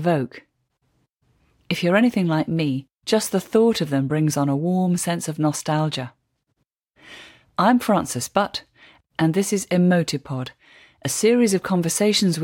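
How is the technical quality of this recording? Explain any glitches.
No glitches or technical faults are audible anywhere here.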